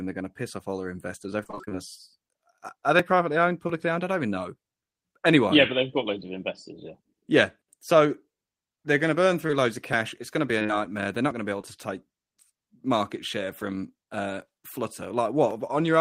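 From 1.43 to 1.76 s there is repeated packet loss, producing a robotic sound. Gap after gap, the longest about 21 ms, is patched by extending the preceding audio, so nearly half of this third of a second is synthesized fill. The result is choppy speech with pieces missing.

Short concealed packet loss follows at 9.47 to 9.51 s, 10.59 to 10.70 s (three consecutive 20 ms losses) and 11.61 to 11.65 s. The decoder bridges each hole by continuing the last waveform, then blends back into the real audio, leaving a brief smear or wobble.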